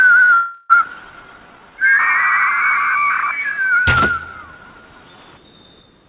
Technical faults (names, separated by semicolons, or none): call audio freeze; skip ahead; jitter buffer slow-down